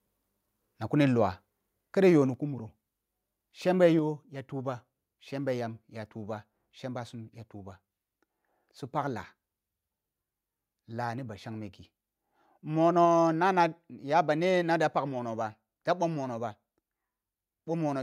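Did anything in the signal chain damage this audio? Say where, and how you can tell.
Yes. At 3.99 s the whole speech level, background included, drops by about 3 dB in a single step and stays there. That's a microphone volume stepped down, likely the call software's input-level control trimming the device gain at the capture stage.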